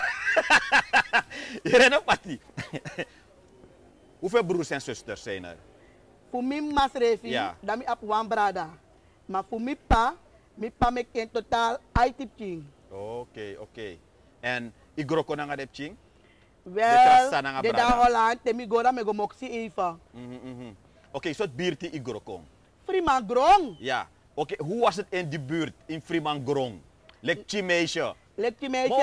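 No technical faults are audible.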